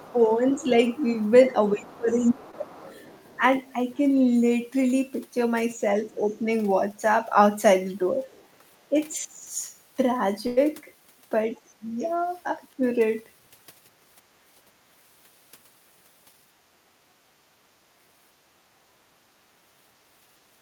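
From 0.0 to 3.41 s the speech is repeatedly turned down, in total about a second, by as much as roughly 25 dB. This is speech suppressed in double talk, likely an echo canceller ducking the talker while the far side also spoke. On a waveform the envelope shows sudden troughs.

Underneath, from 0.0 to 3.99 s, the other side's voice is leaking through at roughly 25 dB below the speech, likely residual loudspeaker echo the canceller missed. A spectrogram shows a faint second set of harmonics beneath the main one.

At 2.51 to 2.55 s there is short concealed packet loss. About 20 ms never arrived, and 13 ms of it was filled by extending the preceding sound. It is heard as a tiny smear. A spectrogram shows a brief stretch of frozen, smoothed harmonics.

From 8.13 to 8.96 s speech suppressed in double talk returns more mildly. About 150 ms dips by around 10 dB, likely from the same canceller, leaving shallow notches in the waveform envelope. 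Within it, from 8.25 to 8.47 s, the other side's voice leaks faintly, roughly 35 dB down, likely uncancelled echo. It is barely visible as a dim trace.

At 10.47 to 10.59 s a burst of packet loss removes 100 ms, with 98 ms concealed by a held, fading continuation before the audio jumps ahead. A spectrogram shows flat, stretched harmonics decaying into noise, and the waveform tapers to a low amplitude.

Finally, from 11.76 to 12.84 s, speech is suppressed in double talk again. About 400 ms is pulled down by up to roughly 20 dB, likely by the echo canceller, and it appears as clear dips in the waveform.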